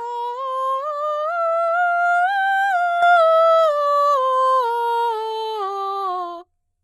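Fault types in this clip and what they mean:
HE-AAC compression: highs sound gritty and metallic rather than merely dull, and stop near 11.7 kHz, likely from heavily coded copied treble around 16 kbps.
sudden gain jump: at 3.02 s, music and background noise step up together by about 6 dB in an instant rather than a fade, likely an unramped gain change.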